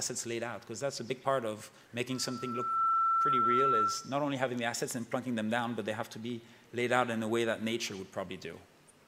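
From 2.10 to 4.15 s a loudspeaker feedback squeal appears. A single 1.3 kHz tone swells over under a second to roughly 5 dB above the sound. Its self-building steady pitch marks a microphone-speaker loop, not a hum.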